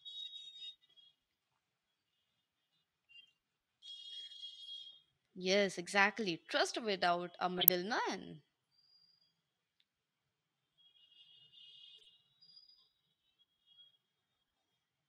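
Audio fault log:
7.58–7.69 s, corrupt frame decoded: just after "without a", a loud burst of garbled noise and chirp lasts about 0.11 s, spanning several consecutive frames. Damaged bits were decoded as if valid, so misread gains and codes threw strong energy into the wrong frequency bands for the length of those frames.
11.98–12.07 s, corrupt frame decoded: a much fainter blip lasts about 0.09 s over a few frames, produced by the same misdecoding at far lower error energy.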